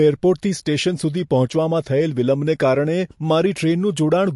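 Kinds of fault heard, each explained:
MP3 compression: The likely cause is a lossy MP3 encode at a low bitrate, around 50 kbps, where the encoder runs short of bits, discards the treble above a fixed point and zeroes weaker frequency lines that flicker between frames. In this speech clip the damage is plainly audible throughout: nothing remains above about 11.3 kHz, so the top end sounds dulled, and the unstable frequency lines give the sound a watery, swirling texture with smeared onsets.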